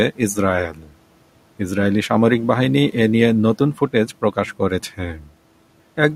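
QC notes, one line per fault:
0.71–0.92 s and 5.17–5.30 s: speech cut by the noise suppressor. Parts of the speech drop by about 13 dB, then about 10 dB. The suppressor mistook them for the room noise, which sits about 26 dB below the speech, and turned them down. They sound swallowed.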